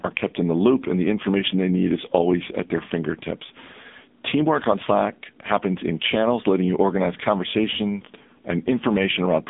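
AMR narrowband mobile codec damage runs through the whole clip. The speech has been squeezed through the 2G/3G mobile speech coder, which samples at 8 kHz and rebuilds each 5 ms stretch from a vocal tract model, a pitch predictor and a handful of pulses. The damage is heavy and points to a low-rate mode around 6.7 kbps. The speech sounds buzzy and synthetic, confined to a telephone band of about 200 Hz to 3.6 kHz, with nothing above 3.8 kHz.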